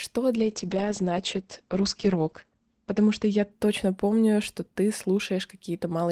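From 0.37 s to 4.09 s the speech goes through a call bitrate drop. The connection's bandwidth estimate fell, so the encoder was given far fewer bits and coded the speech more coarsely. The sound turns rough and watery, and the top end is cut to 8 kHz for the lowest 2.15 s. That fits a fall from about 32 kbps to 10 kbps. It recovers just before "что ты". Packet loss would leave gaps and clicks. Here the sound stays continuous and only degrades.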